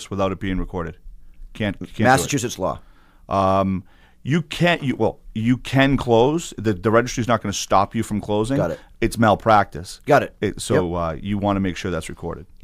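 Speech recording with no audible technical faults at any point.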